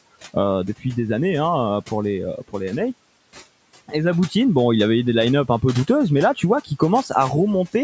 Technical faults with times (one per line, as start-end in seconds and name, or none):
2.38-2.54 speech cut by the noise suppressor